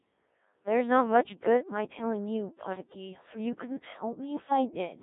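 Codec 2 vocoder damage runs through the whole speech clip, from start to finish. The speech has not been carried as a waveform. Only a handful of parameters survive: pitch, a voicing decision, loudness and a coarse spectral outline. The decoder then rebuilds the voice from sine waves. The damage is heavy, giving a robotic, buzzy tone, and the sound is squeezed into a band of roughly 250 Hz to 3.7 kHz. The coarseness points to a very low bitrate, which fits a setting around 1.3 kbit/s.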